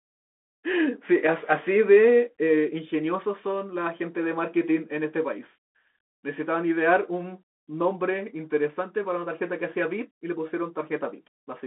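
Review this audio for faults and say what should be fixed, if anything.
Throughout the speech there is Bluetooth CVSD headset codec damage. The one-bit delta coder tracks the waveform with an adapting step, so loud high-frequency energy outruns it and s sounds turn scratchy over a granular hiss. The band runs from about 250 Hz to 3.6 kHz, which fits a 64 kbps CVSD link. On a spectrogram, nothing shows above 3.8 kHz and a grainy noise floor sits under everything. To prevent it, record on the device or use a wideband headset profile.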